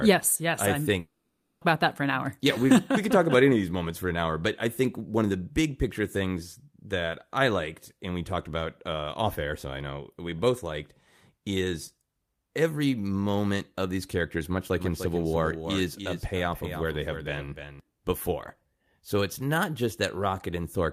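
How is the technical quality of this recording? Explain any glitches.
The recording has two glitches: a gap early on and a stretch of doubled sound later.

From 0.99 to 1.63 s, after "yes I I'm", there is a long network dropout. The receiver seems to have papered over about 620 ms of lost audio, likely from packets that never arrived, with a fading buzzy continuation, then about 60 ms of near-silence before "about that for an". The continuation is what sets it apart from a plain edit cut.

From 14.80 to 17.80 s, just after "of these characters much", there is a doubled audio track. A second full-band copy trails roughly 300 ms behind, around 10 dB quieter. It has no decay or room tone, so it is not reverb, and it starts and stops abruptly.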